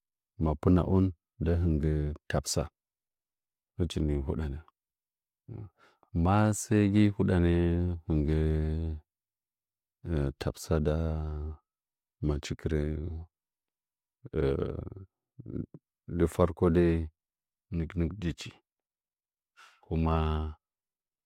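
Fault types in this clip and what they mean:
Clock slip clicks: A fast, regular rattle of tiny single-sample discontinuities runs through the speech from about 0.11 s to 21.24 s, recurring roughly every 20 ms, or around fifty per second. The likely cause is two devices running on separate, unsynchronised clocks that disagree by something like a tenth of a percent, so a sample is dropped or repeated each time the accumulated drift reaches one full sample.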